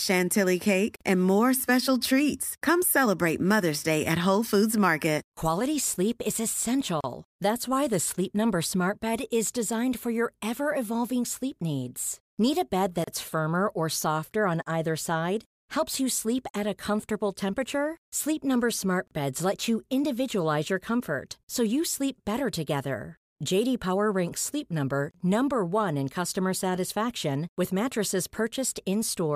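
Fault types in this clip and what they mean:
Gap at a join of encoded pieces: separately encoded chunks were butted together untrimmed, so encoder delay and end padding leave little dropouts every 6 s, at 0.96 s (47 ms, just before "and more special treats"), then 7.01, 13.04, 19.08 and 25.11 s (34 ms each).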